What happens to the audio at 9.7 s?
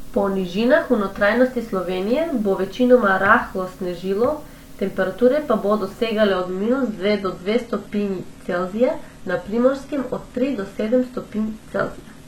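An adaptive stream at a lower bitrate is playing at 9.7 s. From 6.31 s, right after "snežilo temperature pa bodo", to the end of the clip, the player has switched to a cheaper encoding of the same speech because the connection slowed. The change is abrupt with no gap. Nothing is present above 12.3 kHz, and coding artefacts thicken. The sound points to a drop from roughly 96 kbit/s AAC to a 16 kbit/s HE-AAC stream.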